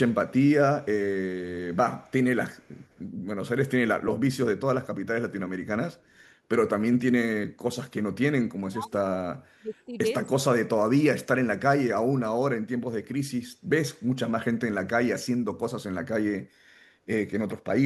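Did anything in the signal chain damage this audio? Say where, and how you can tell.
Yes. The damage is in call processing. Between 2.01 and 2.11 s, and again from 2.54 to 3.01 s, there is an echo leak. A faint delayed copy of the voice trails the original by about 197 ms. It sits very low, roughly 40 dB under the speech. That fixed delay points to a loudspeaker path at the far end. Its echo canceller likely left part of the microphone pickup in place and sent it back.

The second fault is speech suppressed in double talk. From 8.68 to 9.98 s and from 10.65 to 11.49 s, the talker's level collapses in pieces. The drops go deep, around 35 dB in the first stretch and around 40 dB in the second. About a second is hit in the first span and under a second in the second. The echo canceller likely could not separate its own talker from loudspeaker echo, so it turned both down.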